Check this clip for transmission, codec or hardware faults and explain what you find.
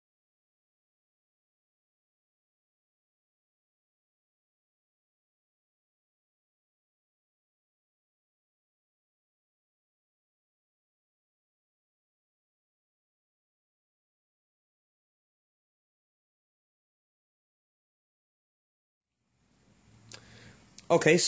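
No transmission, codec or hardware faults turn up in this clip.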